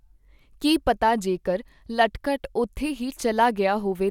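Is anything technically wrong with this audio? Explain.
No, nothing technically wrong can be heard here.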